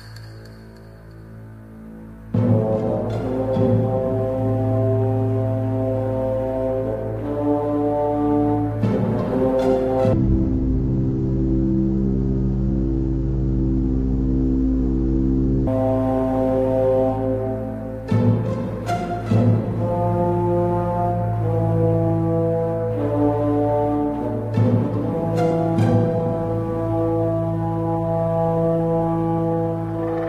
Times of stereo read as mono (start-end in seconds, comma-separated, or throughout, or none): 10.13-15.67